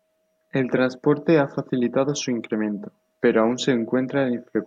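Nothing in this bit of speech stands out as a technical fault; there's simply nothing here that needs pointing out.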